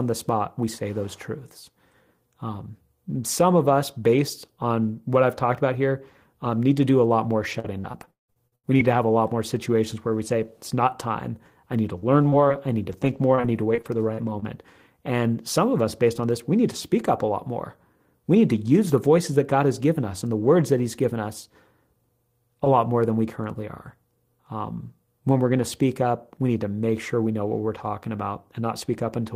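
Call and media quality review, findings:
Repeated packet loss (robotic sound), 7.51–8.86 s, between "do a lot more" and "to have a lot": the network path keeps losing or delaying packets, and the jitter buffer's concealment stretches the last received audio over each hole. About 500 ms is missing, the longest gap 175 ms, with roughly a third of the stretch concealed. The result is choppy speech with pieces missing.

Repeated packet loss (robotic sound), 11.96–14.44 s, after "time I need to": the same loss and concealment mechanism recurs in shorter gaps, none over 41 ms, about 200 ms missing, and 8% of the span patched. This gives a lighter, flickering choppiness.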